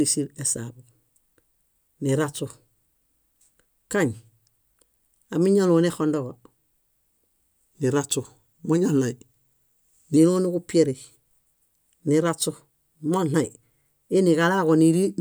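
From 7.73 s to 10.17 s a wrong sample rate fault slows the speech to 0.92 times speed and lowers it by 1.47 semitones, which fits 48 kHz audio played at 44.1 kHz without conversion. Unlike a pitch shift or time-stretch, pitch and tempo drop together.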